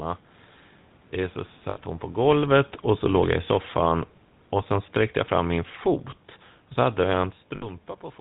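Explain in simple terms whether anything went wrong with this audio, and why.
The whole recording went through the GSM full-rate codec, an old mobile phone coder that cuts everything above 4 kHz and rebuilds the voice roughly, so it sounds buzzy and gravelly throughout.

At 1.7 s and again at 7.56 s, lost GSM frames dropped about 60 milliseconds of sound. The phone filled each gap by repeating the last good piece, which comes out as a brief rough, metallic ring.

From 2.15 s to 3.8 s, the automatic gain falling fault occurred: the level control judged the input too loud, or its background noise too strong, and turned it down gradually, so the voice and the background noise sink together.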